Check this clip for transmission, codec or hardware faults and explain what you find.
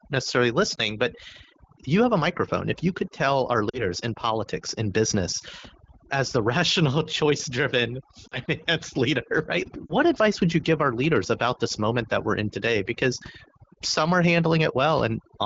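Two faults are present, one throughout and one in four short bursts, heard through the light coding of the AMR wideband (HD Voice) codec.

Overdone noise removal runs through the whole clip. A noise reduction stage set too aggressively switches off frequency bands that sit near its noise estimate, taking quiet speech detail too. The background drops and breaks up into twinkling specks.

Lost AMR speech frames occur at 0.76–0.80 s, 3.69–3.86 s, 8.28–8.39 s and 9.86–9.94 s. Corrupted frames made the decoder repeat its last good pitch and vocal tract settings at falling gain. The first brief dip points to one lost frame; the longer drops toward near silence suggest two, with the voice coming back weak or rough for a moment.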